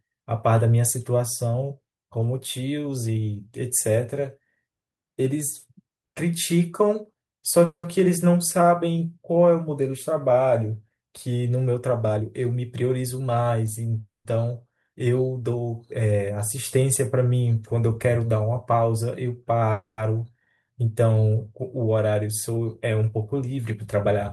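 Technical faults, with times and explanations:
7.65 to 7.85 s, 14.00 to 14.27 s and 19.72 to 20.00 s, call audio freeze: the likely cause is packets stalling in transit until the jitter buffer ran dry. The receiver stretched the last sound into a fading buzz or hiss that dies to silence, for about 90 ms, 150 ms and 10 ms of the 180 ms, 250 ms and 260 ms gaps. The sound then resumes where it stopped, with nothing lost but the delay longer by each gap.
12.16 to 13.57 s, 16.30 to 17.27 s and 21.87 to 23.97 s, jitter buffer speed-up: the buffer held more than its target, so the receiver trimmed many tiny pitch-period slices to drain it. Pitch stays the same while the speech runs at 113%, 104% and 110% of normal pace, removing roughly a fifth of a second, a twentieth and a fifth. It sounds hurried, most clearly in the first and last stretches.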